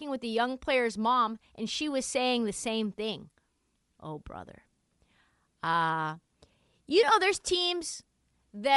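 Throughout the speech, a plainly audible breathy, grainy edge sits on the upper frequencies, where detail has been replaced by noise-like fill. The cause is likely Bluetooth LC3 compression, and the artefacts fit 7.5 ms frames at around 48 kbps.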